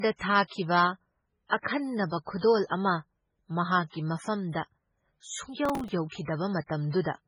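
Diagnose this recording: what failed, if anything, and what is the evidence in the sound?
The codec stage failed across the whole speech clip. Nothing is present above 10.4 kHz, as if a hard wall cuts the treble. The s sounds turn watery and swirly, and consonant attacks smear. The damage is heavy and constant. The likely cause is MP3 compression at a very low bitrate, perhaps near 16 kbps. Short of bits, the encoder drops the top band and zeroes weak frequency lines that flicker between frames.

The driver or buffer stage failed from 5.65 to 5.92 s. A burst of gritty processor overload crackle tears across the speech there, then stops. The texture fits small buffers of about 3 ms missing their deadlines over and over, perhaps a dozen or more in a row. Each missed buffer is filled with stale audio. The hard edges of those repeated old fragments make the crackle.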